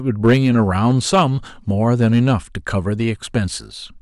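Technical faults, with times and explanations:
0.25 to 1.22 s and 1.93 to 2.33 s, hard clipping: the speech drives past the ceiling of a stage, by about 5 dB and then about 3 dB, so peaks are sheared flat. On the waveform they look like flat plateaus. On a spectrogram, vertical smears of high harmonics appear. The result is harsh crackle on loud syllables.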